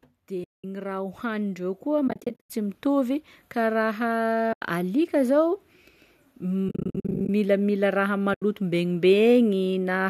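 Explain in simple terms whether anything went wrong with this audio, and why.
From 0.28 to 3.2 s the speech and the background slowly get louder together. This is automatic gain rising: the level control judged the input too quiet and gradually turned it up.

Several times the sound fades softly into brief silence and back. This happens at 0.44 to 0.64 s, at 2.08 to 2.50 s (broken up, each gap at most about a tenth of a second), at 4.53 to 4.61 s just before "alika zao", at 6.69 to 7.29 s in scattered gaps just before "milamila raha", and at 8.34 to 8.42 s just after "milamila raha". This is AAC frame loss with muting: chunks of the compressed stream went missing, and the decoder filled them with silence. The compression itself is likely the low-delay AAC used for calls.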